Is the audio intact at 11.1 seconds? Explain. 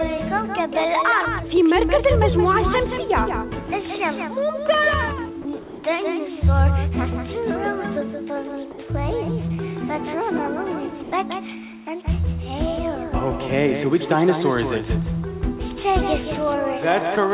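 No. From 11.03 to 11.12 s, about 90 ms of the sound is missing, replaced by a thin, steady hiss. This is sound dropped by the voice detector: the sender's detector most likely judged this stretch to be background and stopped transmitting, so the receiver filled the gap with comfort noise. On a waveform the envelope collapses to a flat, low band of noise for that span. On a spectrogram the detailed energy vanishes into an even, featureless wash before the sound resumes.

The moment is also affected by a doubled audio track that runs through the whole clip. A second full-band copy trails the original by around a fifth of a second and is a few decibels quieter. It is likely a second capture path or a misaligned edit. It sounds like a dry, distinct repeat with no room decay. On a waveform each onset is followed by a smaller duplicate at a fixed offset. On a spectrogram every event appears twice, with the second copy offset to the right.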